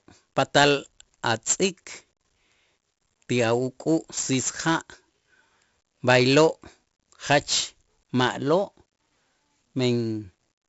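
A speech recording with heavy 4-bit ADPCM compression throughout. A gritty hiss rides on every loud syllable and rises and falls with the level. Sharp onsets distort where the step size lags. Nothing sounds above 7.7 kHz, which fits a 64 kbps stream at a low sample rate.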